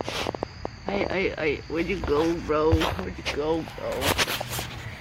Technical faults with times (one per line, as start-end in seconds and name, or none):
0.01-1.12 train of clicks